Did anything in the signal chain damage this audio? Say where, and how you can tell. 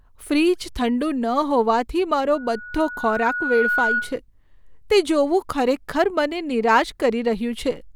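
Yes, there's a loudspeaker feedback squeal in the acoustic loop between speaker and mic. Right after "હોવાથી મારો", at 2.34 s, a 1.5 kHz tone swells over roughly a second and a half until it's about as loud as the speech, then stops at 4.19 s. The loop gain topped one at that frequency.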